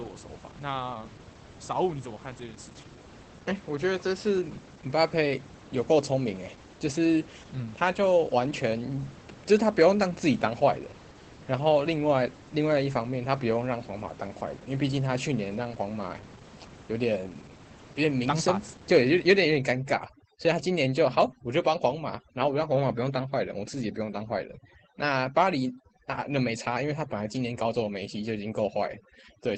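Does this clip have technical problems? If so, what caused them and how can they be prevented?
Yes. Throughout, Opus voice compression running its SILK speech coder cuts everything above 8.6 kHz and codes the excitation coarsely. This fits roughly 12 kbps and leaves speech plainly muffled, hoarse and slightly robotic. Giving the encoder a higher bitrate prevents this.

From 19.56 s to the end at 29.58 s, overdone noise removal mutes frequency bands near its noise estimate. The room noise, about 20 dB below the speech, collapses into twinkling near-silence. Setting the noise reducer to a gentler strength prevents this.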